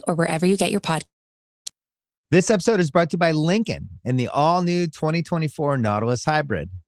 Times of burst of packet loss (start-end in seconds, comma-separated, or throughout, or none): none